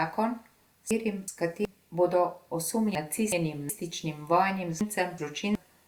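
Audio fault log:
0.91–1.65 s, 2.95–3.70 s, 4.81–5.55 s: frames out of order. In each stretch, two neighbouring 0.37 s blocks play swapped, producing a garbled flutter. No time is lost.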